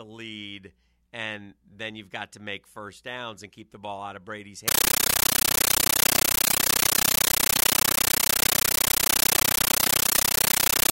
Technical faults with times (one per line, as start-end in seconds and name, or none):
4.68-10.91 compressed stream played as audio